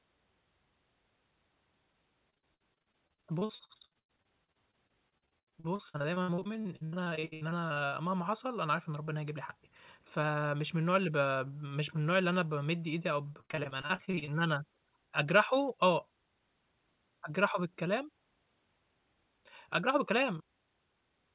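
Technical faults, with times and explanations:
2.3–7.94 s, repeated packet loss (robotic sound): dozens of brief dropouts, the longest about 99 ms, break up the sound. Each hole is bridged by stretching the last received sound forward, and the next loss arrives before that patch settles. Roughly a third of this stretch is synthetic fill, which gives the choppy, robotic texture with fragments missing. This is heard over the narrowband call audio, which has nothing above 4 kHz.
13.34–14.29 s, repeated packet loss (robotic sound): a shorter burst of the same problem, with close-spaced gaps no longer than about 35 ms. They are repaired by repeating the preceding sound, so just over a third of this second is concealment. The rapid repeats produce the same robotic, stuttering quality in a tighter cluster.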